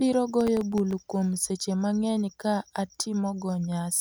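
From 0.41 to 1.05 s, before "kuom sache", processor overload crackle tears through the speech. Buffers under a millisecond miss their deadlines repeatedly. Each miss leaves a brief silent gap.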